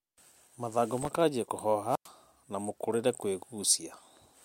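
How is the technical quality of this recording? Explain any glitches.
Two glitches stand out in this speech recording, both short.

From 0.97 to 1.20 s there's processor overload crackle. The machine couldn't finish its audio buffers in time, and it missed a run of them, something like 15 in quick succession. Each miss replayed a scrap of old audio with hard edges. With buffers that tiny, under a millisecond, those repeats pile up into a gritty, tearing crackle over the sound that stops once the load eases.

Then from 1.88 to 2.09 s you get a wireless microphone squelch dropout. The FM radio link from the mic faded far enough that the receiver's squelch kicked in and muted the output. You hear a quick swell of hiss as the signal weakens, then a hole of near silence lasting about 101 ms while the squelch holds the output shut, and then the sound comes back.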